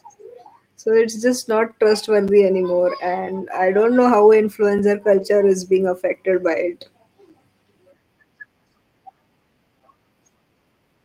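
At 2.28 s, just after "it's just not", the sound drops out for about 6.5 ms. More holes of the same length follow at 4.79 s and 7.29 s. This is a gap between chunks. The audio arrived in 2.5-second pieces, with silence left at each join. Nothing is lost, but the sound is interrupted at each join.

From 5.13 to 5.23 s, the sound turns rougher and noisier for 60 ms. This is a lost packet rebuilt from error correction. The decoder played low-bitrate copies carried in the next packets, which fits about three lost packets.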